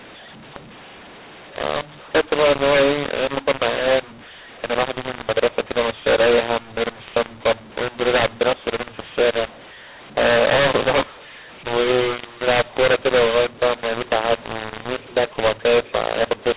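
From start to finish the speech has the mu-law and A-law mix-up: A-law telephone audio decoded as mu-law, so levels scramble, everything turns harsh, and pauses fill with noise.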